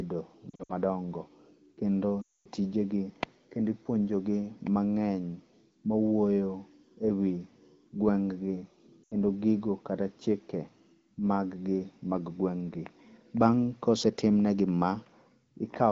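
Brief warbles and quick drops to near silence break up the speech at 0.50 to 0.72 s, at 2.21 to 2.48 s just before "tijegi kendo ipuonjo", and at 9.04 to 9.14 s before "gigo kata chike". These are lost AMR speech frames. The first is scattered dips, and the second is a longer run that quickly drops to near silence before the voice returns rough. In each, the decoder held the last good pitch and vocal tract settings with shrinking gain. The lightly coded AMR-WB sound around them stays clear.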